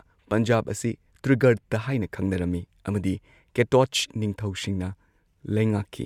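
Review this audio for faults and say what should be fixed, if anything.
Nothing here needs fixing; I listened through the whole recording and didn't hear a single problem worth flagging.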